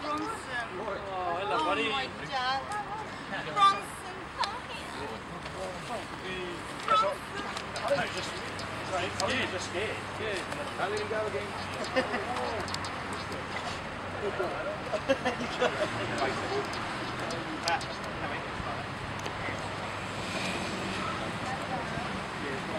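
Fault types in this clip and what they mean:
No audible faults detected.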